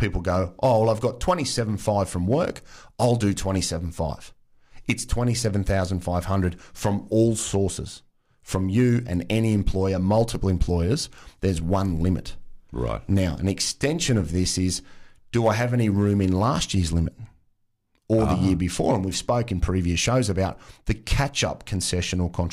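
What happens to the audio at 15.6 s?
Nothing goes wrong at 15.6 s; the speech runs on intact through that moment, with no dropout, click or distortion.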